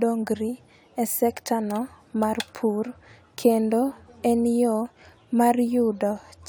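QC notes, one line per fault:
No faults were heard on listening.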